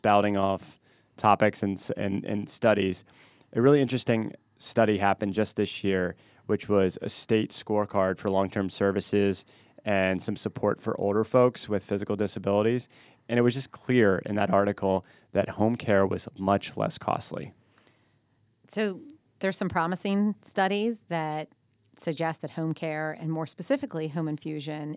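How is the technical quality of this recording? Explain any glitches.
No technical glitches can be heard anywhere in this speech recording. There is nothing in the audio that calls for an explanation.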